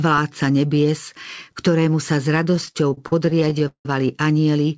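Speech, band-limited to nothing above 8 kHz by the call codec, shows repeated stalls (stutter) from 2.51 to 3.86 s: the jitter buffer kept running empty, so the last sound was stretched, up to 171 ms at a time, totalling about 420 ms. Unlike dropouts, nothing is lost; the audio just drags.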